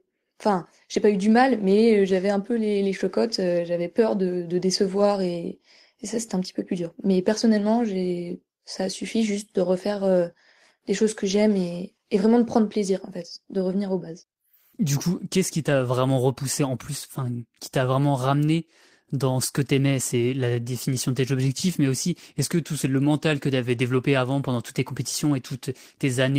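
No technical faults are audible.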